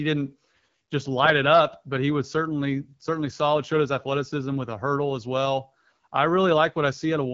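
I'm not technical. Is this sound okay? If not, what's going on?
Yes, it's fine: it's speech carried over an ordinary HD Voice phone connection, and there's nothing wrong with it to worry about.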